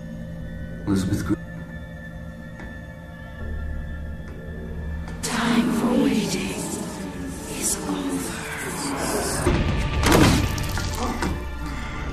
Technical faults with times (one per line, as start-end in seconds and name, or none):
1.33-1.35 damaged data in a compressed stream
5.23 damaged data in a compressed stream
9.45 damaged data in a compressed stream